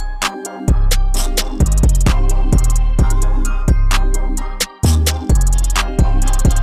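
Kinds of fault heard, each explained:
No technical faults can be heard anywhere in this audio.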